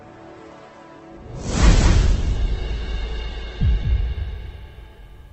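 Doubled audio track, throughout the clip: a second full-band copy of the sound runs roughly a fifth of a second behind the original and about 5 dB quieter. The copy has no decay or room colouring, so it is heard as a hard, flat repeat rather than an echo. The likely cause is the same signal being picked up a second time through a slower path, or an edit that leaves two copies out of step.

Adaptive stream starting at a low bitrate, from 0.0 to 3.84 s: for the opening stretch the treble is missing, with nothing above 8.1 kHz, and codec artefacts are strong. This points to playback beginning on a low-rate Opus version, around 12 kbit/s, chosen so the stream could start quickly. At 3.84 s the player switches to a better version, consistent with about 64 kbit/s, and the quality improves suddenly with no gap.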